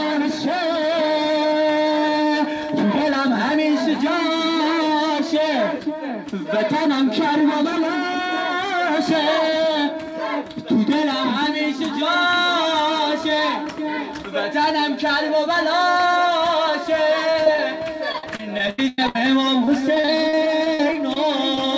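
Repeated packet loss (robotic sound) runs across three stretches: 17.32 to 17.59 s, 18.12 to 19.16 s and 19.65 to 21.17 s. Packets kept arriving late or not at all, and each hole was patched by extending the last stretch of sound before the next hole arrived. In the middle stretch about a third of the time is patched, with gaps up to 98 ms, so the audio turns choppy, with pieces missing.

Short concealed packet loss follows at 21.55 to 21.58 s, where roughly 20 ms never reached the decoder in time. The receiver bridged it by continuing the preceding sound, then blended back into the real signal. It comes across as a brief smear or wobble. Throughout, the call path's band limit is present, with nothing above 8 kHz, which fits a wideband codec such as G.722.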